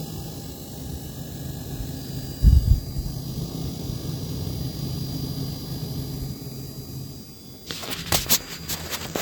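From 1.84 s to the end, a feedback whistle sits behind the sound: a thin, steady tone at 4.8 kHz, around 20 dB below the main signal, swelling and fading slowly in level. The likely cause is a loudspeaker-to-microphone loop held right at its feedback point, so this one frequency keeps ringing without climbing into a howl. Those slow level swells set it apart from a fixed electrical tone or interference, which would stay perfectly constant.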